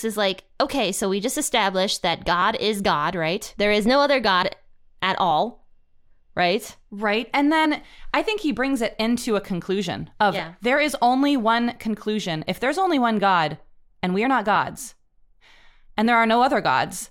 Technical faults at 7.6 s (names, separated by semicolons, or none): compressed frames skipped